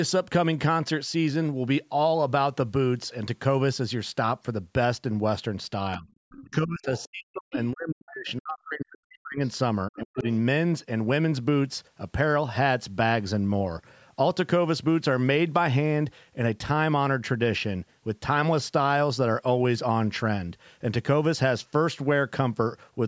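From 5.97 to 10.25 s the speech dips sharply and breaks up in pieces, about three seconds of it affected, with the deepest drops roughly 40 dB down. This is speech suppressed in double talk, likely caused by an echo canceller that heard both sides at once, could not tell the near talker from loudspeaker echo, and attenuated everything. On the waveform the envelope collapses in ragged gaps. On the spectrogram, energy thins out or vanishes in vertical slices, with the upper band toward the 8 kHz ceiling of the call processing fading.

Inside that stretch a second, fainter voice comes through: the other side's voice leaking through, likely residual echo the canceller failed to remove from the microphone. It appears from 6.31 to 8.32 s at about 20 dB below the speech, again from 9.14 to 9.48 s at about 30 dB below, and in a brief scrap from 10.2 to 10.26 s at about 20 dB below. On a spectrogram it shows as weak harmonic traces. 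On the waveform it appears as low-amplitude bursts.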